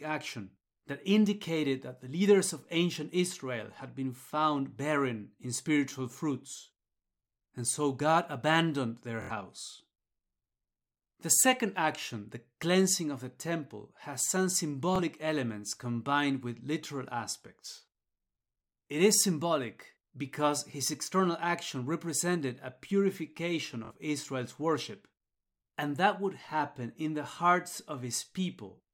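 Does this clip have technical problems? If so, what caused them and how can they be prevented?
Yes. In this speech, brief stutters, each a tiny slice repeating before the sound jumps ahead, occur at 9.22 s after "abandoned their", at 14.96 s between "the temple has some" and "elements combined with literal", and at 23.85 s after "action represented a purification". This is Bluetooth stutter: the receiver replayed its last buffer while packets were late, skipping about 70, 23 and 46 ms. Keeping the devices close and away from Wi-Fi interference prevents it.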